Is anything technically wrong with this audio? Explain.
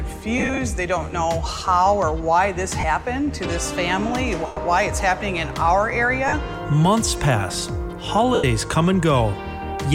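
Yes. Lost LE Audio frames at 0.38–0.58 s (about 98 ms missing in short runs, the longest around 50 ms), 2.80–2.84 s, 4.46–4.57 s, 6.28–6.33 s and 8.34–8.44 s. The LC3 decoder fills each gap by reusing the last spectrum with randomised signs and fading it, so tones smear into brief noisy washes. The light codec compression underneath is hard to hear.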